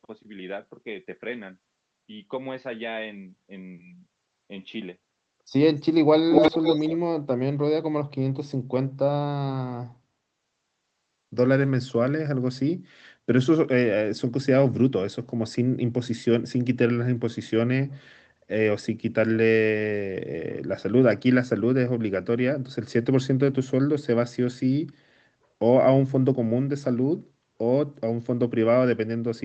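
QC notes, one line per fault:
6.3–6.98 s: echo leak; the speech repeats 294 ms late, about 5 dB louder than the original, likely loudspeaker pickup the echo canceller failed to remove.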